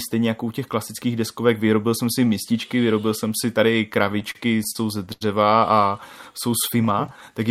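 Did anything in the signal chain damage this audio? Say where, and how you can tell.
Yes, it's network trouble at the receiver's jitter buffer. Between about 4.05 and 5.23 s the speech hits repeated stalls (stutter): eleven little hitches where packets showed up late, the buffer ran dry, and the receiver stretched the last bit of sound to cover the gap. About 234 ms got filled that way, roughly a fifth of that stretch, the longest hold being 80 ms. Nothing actually drops out, but the delivery drags and stumbles there.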